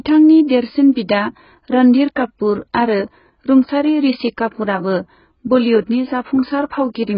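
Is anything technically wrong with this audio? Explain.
Yes. The speech carries AAC compression damage from start to finish, likely from AAC-LC coding at a very low bitrate, around the level of 12 kbps. Starved of bits, the encoder pulls its bandwidth down so that nothing survives above about 5.1 kHz, and it quantises the remaining frequency lines coarsely. The result is heavy damage: dull, muffled speech with smeared, fizzy sibilants and a warbling texture on sustained sounds.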